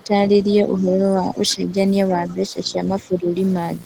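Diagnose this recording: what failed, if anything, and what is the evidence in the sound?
Analogue wiring fault: video or display buzz runs throughout, at about 20 dB below the speech. The 60 Hz field-rate buzz with hash shows a screen or video cable coupling in.

Call processing: the speech dips from 0 to 1.75 s, by up to roughly 10 dB, and from 2.16 to 3.35 s, more shallowly. This is likely speech suppressed in double talk by the echo canceller.

Call processing again: faint scraps of a second voice appear at 1.50 to 1.55 s and 2.28 to 2.34 s, about 25 to 30 dB down. This is likely the other side's voice leaking through imperfect echo cancellation.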